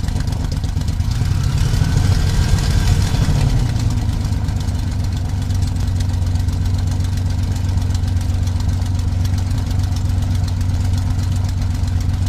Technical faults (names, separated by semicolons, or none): compressed frames skipped